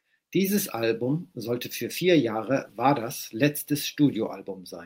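Nothing stood out on listening to this recording of speech.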